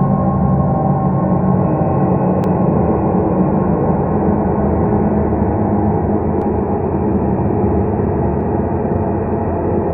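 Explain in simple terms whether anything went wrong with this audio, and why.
Three small clicks or tiny skips interrupt the sound, at about 2.44, 6.42 and 8.41 seconds, as if the audio briefly jumps forward. This is an overlap between stream segments. The audio arrives in 2-second pieces, and here the timing labels of neighbouring pieces overlap slightly, so the player throws away a sliver it wrongly treats as duplicated. Only a few milliseconds go missing each time, about 6, 16 and 6, but the sudden jump is audible.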